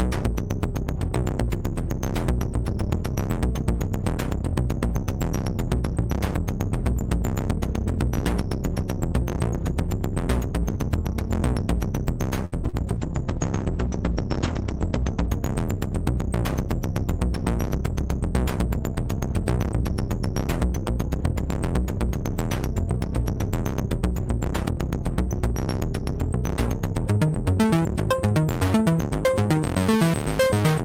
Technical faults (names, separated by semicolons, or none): short stall from a late packet; short concealed packet loss; call bitrate drop